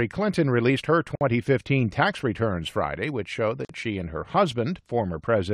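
At 1.15 s the sound drops into a silence of about 56 ms, ending at 1.21 s, and at 3.65 s a second gap of about 45 ms runs to 3.69 s. Both are gaps at a join of encoded pieces. The pieces were encoded separately and butted together untrimmed, so each encoder's start-up delay and final-frame padding remain as dead air. Each hole has smeared edges, and the sound resumes exactly where it broke off.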